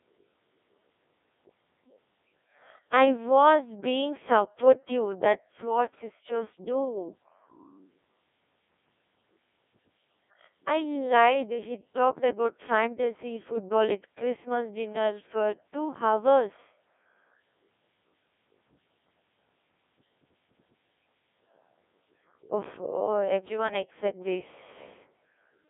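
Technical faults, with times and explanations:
Throughout, Codec 2 vocoder: the speech is rebuilt from sine waves using only pitch, voicing, energy and a spectral envelope, so it sounds robotic and buzzy, with heavy damage, a band of roughly 250 Hz to 3.6 kHz and nothing above 3.8 kHz. The buzz suggests a rate near 1.6 kbit/s. Unlike ordinary low-bitrate smearing, the original waveform is gone entirely.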